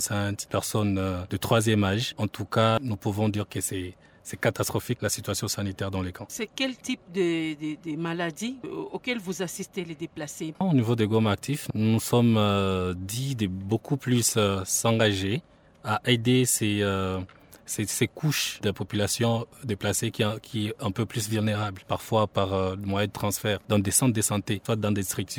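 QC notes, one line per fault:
No faults found in this clip. Nothing in the audio calls for a QC note.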